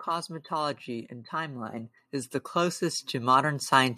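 From 0.07 s to 3.95 s the level climbs steadily: automatic gain rising. The gain control judged the incoming signal too quiet and kept pushing its gain up across nearly the whole clip, for a total lift of about 12 dB. Because the adjustment acts on the entire input, the background rises along with the speech, so the noise floor swells in step with the voice rather than staying fixed beneath it.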